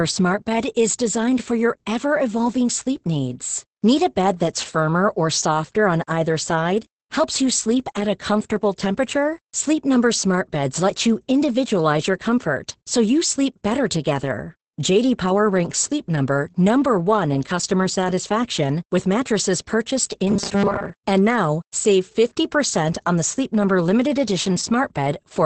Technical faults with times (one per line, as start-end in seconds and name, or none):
0.00-25.45 Opus voice compression
20.28-20.90 robotic sound from repeated short buffers